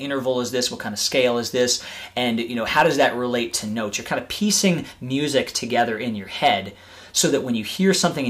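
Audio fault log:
2.77–3.06 s, 5.78–5.82 s and 6.44–6.51 s, hard clipping: peaks overdriven by about 6, 3 and 4 dB are sliced flat, adding high harmonics heard as harsh crackle. The waveform shows squared-off tops, and the spectrogram shows brief broadband vertical smears.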